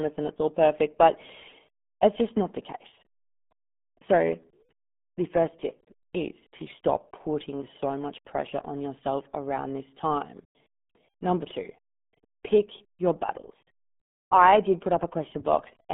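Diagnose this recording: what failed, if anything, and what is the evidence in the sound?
The speech sounds muffled and gargly for the whole clip, with a thin telephone-like band running from about 150 Hz up to 3.5 kHz and nothing at all above 3.7 kHz. The stage is the codec: this is the RealAudio 14.4 codec, whose heavy damage and narrow ceiling fit a rate of about 8 kbit/s. At that rate, coarse frame-by-frame modelling of the signal smears consonants and leaves a bubbling residue on the speech.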